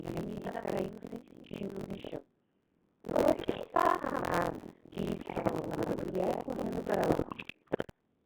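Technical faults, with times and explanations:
Throughout, Codec 2 vocoder: the speech sounds robotic and buzzy, with heavy damage, because at a rate that fits 1.6 kbit/s only pitch, voicing, energy and a spectral envelope survive, and the decoder rebuilds the voice from sine waves rather than keeping the original waveform.
Throughout, buffer tearing: a steady rattling buzz near 43.1 Hz rides on the speech and drops away in pauses. Writer and reader of the ring buffer have slipped, so about half of each buffer replays audio roughly 100 ms old, which fits a 1024-sample buffer.
3.05–3.58 s, 5.08–6.10 s and 7.08–7.87 s, bit errors on digital voice radio: the synthetic voice jumps in pitch, level and tone, breaking into bleeps, warbles and robotic gibberish. Around 7 to 15 percent of bits flipped, corrupting whole vocoder frames. The second burst ends just before "correndo para", and the third begins just after it.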